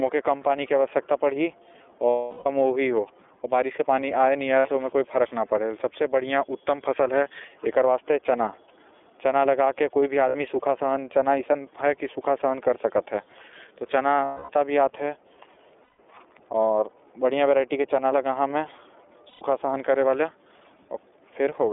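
The whole clip runs through the iLBC codec, squeezed into a 300 Hz to 3.5 kHz phone band, so the speech sounds clearly rough and a bit synthetic throughout. Lost iLBC frames cause dropouts at 2.10–2.46 s, 4.58–4.67 s, 10.29–10.35 s, 14.24–14.52 s, 15.84–15.99 s and 19.29–19.42 s. In each gap the decoder loops the last pitch cycle into a buzzy held vowel, and the sound snaps back right after.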